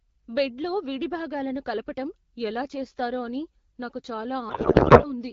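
From 4.49 to 5.10 s, just after "ఎలా చేస్తారో అని నాకు", a codec payload misread means the decoder unpacks the AMR-WB bits with fields misplaced, which fits octet-aligned frames read as bandwidth-efficient. The speech turns into garbled warbling noise that barely tracks it.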